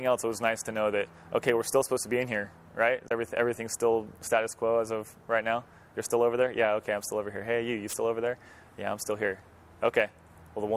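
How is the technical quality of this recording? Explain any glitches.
There is one glitch. At 3.05 to 3.11 s there is damaged data in a compressed stream. Some bytes in those frames are wrong, so the decoder misreads them and loses sync until it finds the next valid frame header. The result is a short blip, about 70 ms long.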